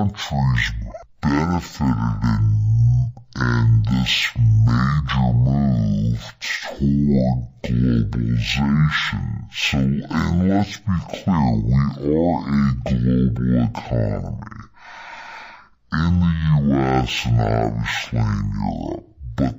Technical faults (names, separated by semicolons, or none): stereo read as mono